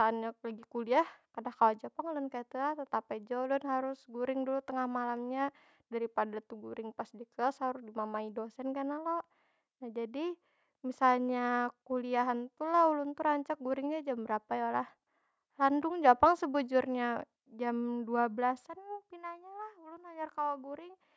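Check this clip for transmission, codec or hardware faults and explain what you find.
No transmission, codec or hardware fault can be heard in this speech. The call microphone processing is working as intended: its high-pass filter trims the lowest bass, and nothing reaches above 8 kHz.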